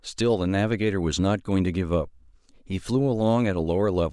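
No technical faults can be heard anywhere in the recording. The speech comes through steadily, with no dropouts, clicks or sudden changes in level.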